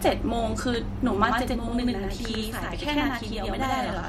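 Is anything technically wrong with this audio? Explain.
Yes, there's a channel delay (doubling) problem. From about 1.25 s to the end, one channel runs late by roughly 93 ms, which fits a 4096-sample buffer. The two channels are then folded down to mono, so the late copy doesn't smear into the original. It lands as a distinct second hit at the same level. The speech gets a doubled, slap-echo quality, as if every syllable is repeated just behind itself.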